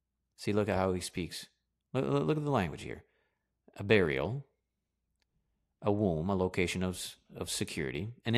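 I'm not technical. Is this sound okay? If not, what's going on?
Yes, this sound is okay, and nothing is going on that needs fixing.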